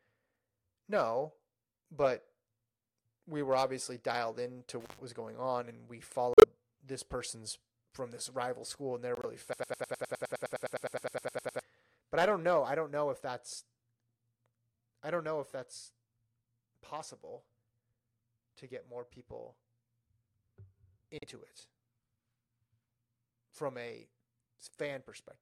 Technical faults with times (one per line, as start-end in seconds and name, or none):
4.80-4.98 intermittent contact
6.33-6.44 corrupt frame muted
9.15-9.25 corrupt frame muted
9.53-11.61 broken-record loop
21.18-21.24 corrupt frame muted